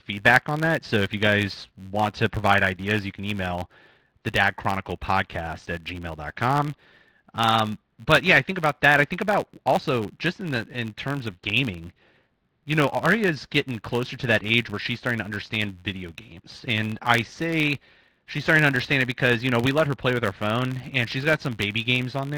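From start to finish, the speech carries a steady buzz at about 93.8 Hz. It is a filter restarted on every block. The filter loses its memory at each block boundary and begins again from silence. That leaves a tiny transient at the start of every block. The ticks repeat fast enough to fuse into a buzz. Its rate fits a 512-sample buffer. The buzz rises and falls with the speech level, louder on strong passages.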